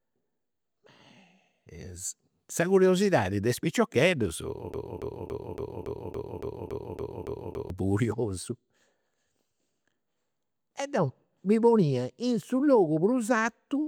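A broken-record loop runs from 4.74 to 7.70 s: a 281 ms fragment of speech repeats exactly eleven times, likely because playback stalled, and the intended audio is lost.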